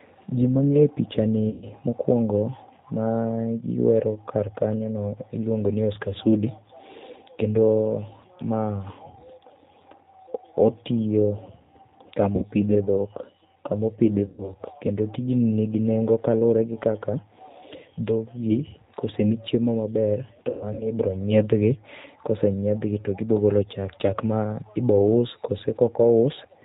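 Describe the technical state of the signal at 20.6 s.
At 20.6 s you're inside a VoIP packet loss concealed by the speech codec, running from 20.49 to 20.92 s just after "kosemi chiemo maber to". About 180 ms went missing over 300 ms, longest gap 120 ms. The decoder stretches its last pitch and filter into a fading buzzy tone or coloured noise, and the speech stays weak for a bit after. Underneath, the whole clip has a plainly rough, synthetic, band-limited quality with nothing above 4 kHz, which fits an 8 kbit/s G.729 codec.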